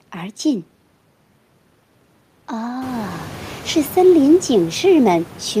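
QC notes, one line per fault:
No faults to note: the room noise that rises by about 20 dB around 3 s belongs to the recording and stays about 22 dB below the speech.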